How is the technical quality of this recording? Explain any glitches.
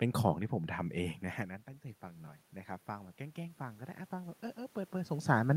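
The recording has one recurring fault, automatic gain rising, heard twice. From 0.76 to 2.49 s and again from 3.17 to 5.22 s, the level control reacts to the input falling by about 15 dB, as the talker moves away around 1 s and 5 s, and slowly lifts its gain by about 4 dB, so the voice and room noise swell together.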